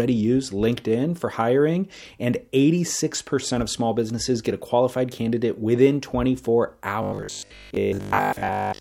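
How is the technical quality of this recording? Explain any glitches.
The recording has one glitch, at the very end. Robotic sound from repeated short buffers, 7.03 to 8.81 s: audio likely arrived too seldom, so roughly 20 ms chunks were replayed over most of the stretch, forcing a rigid metallic 50 Hz buzz onto the speech.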